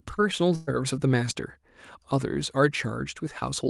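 A speech clip with a burst of packet loss from 0.55 to 0.70 s, where the receiver stretched the last sound, fading it for about 120 ms, then resumed with audio missing.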